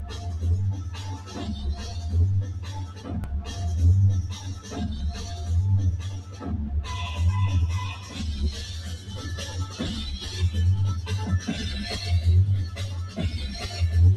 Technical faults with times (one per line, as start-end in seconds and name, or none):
0.00-14.16 noise suppressor applied to music or sounds
0.00-0.26 sound cut by the noise suppressor
0.79-1.28 sound cut by the noise suppressor
2.49-3.01 sound cut by the noise suppressor
6.15-6.40 sound cut by the noise suppressor